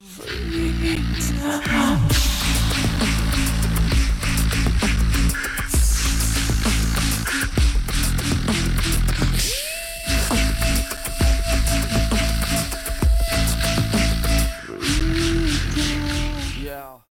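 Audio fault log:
0.95, 2.96, 4.96, 6.97, 8.97, 10.97, 13.00 and 15.00 s: gap between stream segments, 3 to 11 ms silences every 2 s where segment timestamps fall short; flat, hard-edged notches in the waveform, thin blank vertical slivers on a spectrogram.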